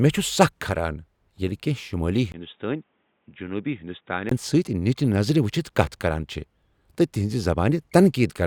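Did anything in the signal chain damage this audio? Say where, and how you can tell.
Yes. At 2.32 s, after a 20 ms gap, it drops quieter and dull with nothing above 3.8 kHz until 4.31 s, likely the input switched to a poorer device.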